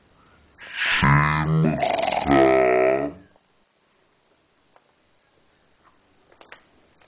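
Wrong sample rate, throughout the clip: the audio plays back at half the rate it was captured at, with no conversion, which fits a 16 kHz recording played at 8 kHz. Everything runs at half speed and a full octave (12 semitones) lower in pitch.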